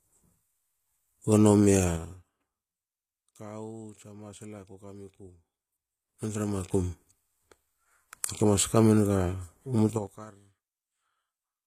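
The whole clip carries a grainy, metallic treble, with nothing above 14.9 kHz. That's HE-AAC compression, likely at something like 24 kbps. Only the lower band is really coded, and the top end is rebuilt by copying lower content upward. The copied harmonics don't line up with the real ones, so the s sounds come out gritty and lispy. The damage is plainly audible.

Then there's zipper noise, three times. From 1.88 to 2.30 s the level drops by about 20 dB in steps of about 4 dB. Right after "kawu tsa masla kokamiku", from 5.72 to 6.91 s, it climbs back up by about 20 dB in 2 dB steps. From 9.90 to 10.24 s it falls again by about 25 dB in 6 dB steps. Each time the gain moves in hard jumps of about ten a second with no smoothing, and every jump leaves a small click, so you hear a ticking zip riding on the sound while the level moves.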